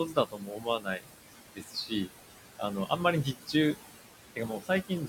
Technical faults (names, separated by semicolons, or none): noise suppressor artifacts; speech cut by the noise suppressor